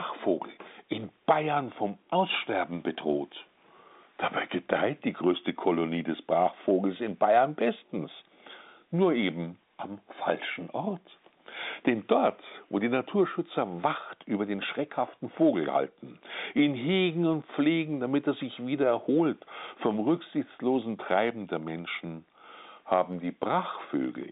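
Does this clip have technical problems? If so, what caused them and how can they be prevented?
No, the speech comes through a normally working G.711 A-law telephone path at 64 kbps, with the expected line band of roughly 200 Hz to 3.7 kHz and no technical problems to report.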